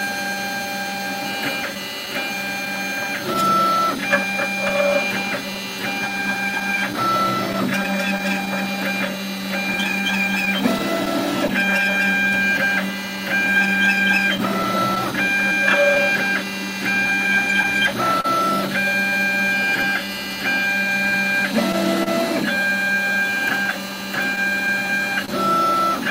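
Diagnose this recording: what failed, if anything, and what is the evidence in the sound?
Clock drift between sender and receiver, at the network and jitter-buffer stage: the sending clock runs about 3 percent slow, so the buffer keeps draining. Unlike a one-off loss, the evidence is an unsteady tempo that persists across the whole clip rather than clustering at one moment.

Repeated timing corrections, at the receiver's buffer: from 0.35 s to 25.24 s the playback is stretched to 99 percent speed, adding roughly a third of a second by repeating short slices. The hiccups stay small and one-directional, and they are spaced unevenly, which separates them from a steady resampling error.

Scattered short gaps, at the network stage: lost or late packets leave small holes from 1.75 to 8.48 s, 9.84 to 22.08 s and 23.31 to 25.30 s. There are dozens of them, the longest around 30 ms, each patched by extending the preceding sound. 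They are heard as brief smears or ticks, not silent dropouts.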